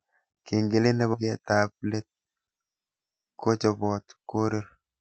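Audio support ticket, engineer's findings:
Skip ahead at 1.13–1.15 s. Speech jumps forward with no gap fill. Roughly 0.4 s of audio is gone and the two sides are butted together. Probable component: jitter buffer, which dropped a queued stretch, or loss in transit, with later audio already waiting. The delay drops by about the same 0.4 s.

Jitter buffer speed-up at 1.23–2.52 s (109% rate, around 0.15 s trimmed) and 3.11–4.17 s (108% rate, about 0.1 s trimmed). Speech sounds hurried but keeps its pitch. Probable component: the jitter buffer sat above its target depth and cut short pitch-period segments repeatedly to drain the excess delay. The Opus call path at 64 kbps limits the band to 8 kHz throughout.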